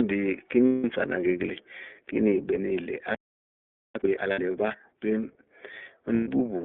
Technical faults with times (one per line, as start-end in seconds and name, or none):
0.00-6.65 iLBC codec
0.67-0.85 lost iLBC frames
3.15-3.95 playback stall
3.95-4.75 time-compressed catch-up
4.32-4.39 lost iLBC frames
6.14-6.27 lost iLBC frames